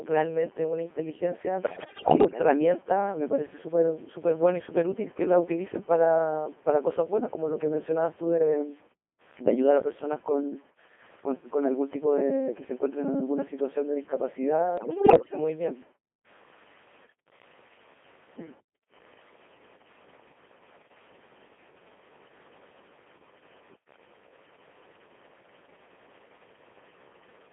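Throughout, the speech has likely been truncated to about 8 bits without dither, so grainy distortion follows the speech, sitting roughly 30 dB below it and turning quiet passages gritty.

The Codec 2 vocoder at 2.4 kbit/s discards the waveform and resynthesises speech from pitch and envelope. The result is robotic, buzzy and heavily damaged, confined to roughly 250 Hz to 3.4 kHz.

From 1.63 to 2.40 s and again from 14.78 to 15.38 s, bit errors on digital voice radio corrupt the vocoder frames at a high error rate. The voice lurches in pitch and level and breaks into warbling, bleeping gibberish.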